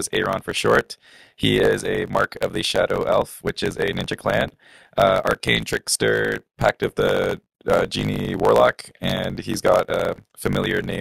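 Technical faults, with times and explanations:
Throughout, block size mismatch (truncated): the speech carries a steady buzz at 54.4 Hz and runs 1.16 times fast at near-normal pitch, which fits a stage writing 1024-sample blocks that the next stage reads only partly, discarding each block's tail. Every dropped tail leaves a splice click, and these repeat at the block rate. A spectrogram shows evenly spaced vertical striations with harmonics of 54.4 Hz. The waveform shows abrupt jumps at each block join.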